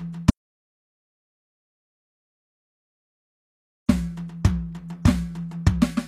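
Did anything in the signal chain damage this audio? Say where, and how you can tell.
Yes. The music cuts out at 0.30 s and stays dead until 3.89 s, about 3.6 s of total silence with no room tone underneath. That's an audio dropout to silence, likely at the input or link stage, where the device or connection lost signal and the recorder kept writing silence.

The codec stage also did plainly audible damage throughout. The treble sounds rebuilt rather than captured, and nothing comes through above 14.9 kHz. That points to HE-AAC compression at a low bitrate around 24 kbps, where spectral band replication copies lower bands upward so the top end doesn't match the original.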